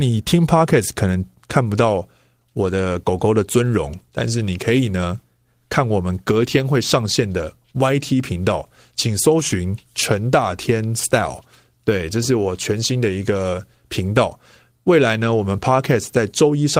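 No audible technical faults.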